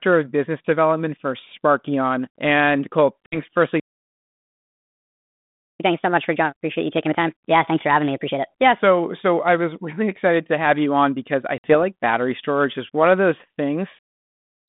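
At 3.26 s, packet loss on an ADPCM call drops about 60 ms of audio, roughly three packets' worth, and fills the gap with silence. The decoder's adaptive predictor and step size no longer match the sender's, so after the abrupt hole the sound comes back with a brief roughness before it settles. The call runs through G.726 ADPCM at 32 kbit/s within a 150 Hz to 3.6 kHz band, which adds only light coding hiss.

At 3.80 s a playback stall begins: the player most likely ran out of buffered data or its thread was held up. The output cuts to silence mid-flow for 2 s and resumes at 5.8 s.

From 5.8 s to 8.8 s, starting on "so I was really", the player works off its backlog with catch-up at higher speed. It resamples to 1.25 times normal speed, so tempo and pitch both rise, by about four semitones, giving a hurried, chipmunk-like lift until playback drops back to normal rate at 8.8 s.

At 11.58 s, between "you on because I" and "like battery storage is", a second packet loss on the ADPCM call removes another 60 ms, again about three packets. 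The same hard-edged gap is followed by a short patch of distortion while the decoder's state recovers.

At 13.99 s, after "is one of those", a second playback stall, again likely from starved or blocked playback, silences the output for about 0.69 s, through to the end of the clip.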